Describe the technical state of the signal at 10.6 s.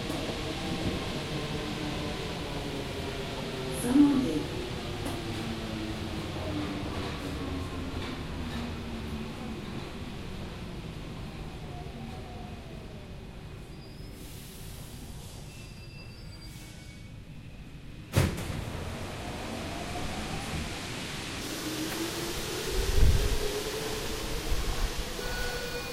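At 10.6 s the signal is intact, with no technical fault audible at that moment.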